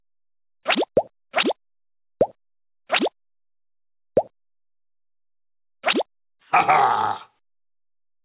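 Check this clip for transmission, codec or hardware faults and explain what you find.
One fault runs through the whole clip: gain pumping. The gain swells between loud sounds and ducks by about 10 dB under each one. The likely cause is input gain set far too high, with a fast limiter clamping every peak. Levels sound squashed. The call path cuts everything above 4 kHz, which fits a narrowband telephone codec.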